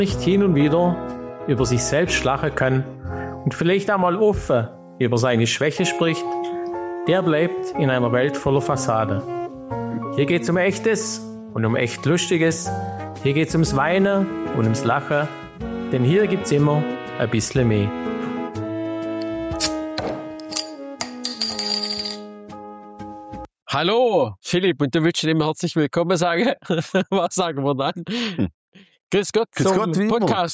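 Gain pumping runs throughout. The gain swings by roughly 5 dB, likely from excessive gain driving a fast limiter.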